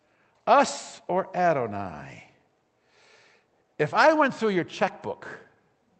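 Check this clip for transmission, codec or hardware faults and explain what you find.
No transmission, codec or hardware faults turn up in this speech clip. It has passed through a WebRTC call path, and the top of the spectrum stops at about 8 kHz, which fits the wideband setting of an Opus call codec.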